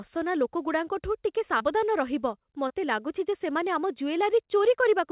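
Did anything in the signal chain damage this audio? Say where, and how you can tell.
Yes. Short concealed packet loss at 1.58–1.62 s and 2.68–2.72 s: about 20 ms of network audio arrived too late, and the receiver extrapolated it, leaving brief smears.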